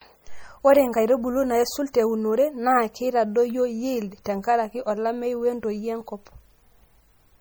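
MP3 compression runs through the whole clip, and its sound is plainly audible: the speech has a watery, swirling quality with chirpy, metallic s sounds and softened consonant attacks. The likely cause is an encoder short of bits, which fits a low MP3 bitrate near 48 kbps, cutting off the treble and letting weak frequency lines flicker between frames.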